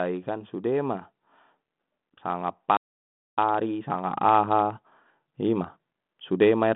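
A playback stall from 2.77 to 3.38 s cuts this speech dead for about 0.61 s of silence before it resumes. The likely cause is the player running dry of buffered data or having its output thread blocked until the data stream caught up. A time-compressed catch-up follows from 3.38 to 6.38 s, with the speech running about 1.15 times fast at unchanged pitch. Small slices are trimmed and cross-faded to work off the backlog. Throughout, the G.726 telephone coding keeps the band narrow, with nothing above about 3.8 kHz.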